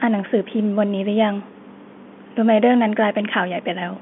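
Nothing stood out on listening to this speech, which carries the narrow band of an ordinary telephone line with nothing above roughly 3.8 kHz.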